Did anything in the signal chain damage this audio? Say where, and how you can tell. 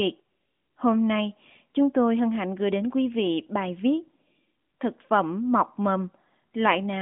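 No, nothing in the chain damaged this audio.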